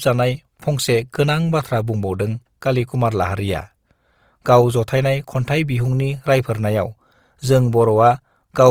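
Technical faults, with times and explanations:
Throughout, Opus compression: the speech sounds rough and grainy, with the high end still present but noisy rather than cut away. This likely comes from Opus in CELT mode filling starved bands with folded or noise content, at a rate that fits about 24 kbps.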